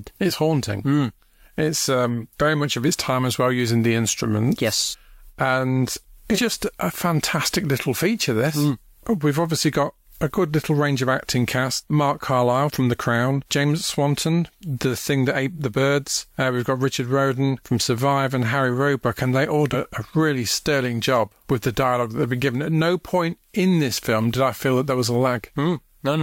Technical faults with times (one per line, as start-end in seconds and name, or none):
4.90-4.95 compressed frames skipped
6.34-6.38 compressed frames skipped
19.72-19.76 compressed frames skipped